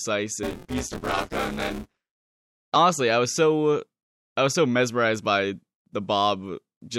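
Speech, with buffer tearing from 0.43 to 2.43 s, ending before "honestly I was so": a 172 Hz robotic buzz, fitting a 256-sample buffer, seen as evenly spaced waveform jumps.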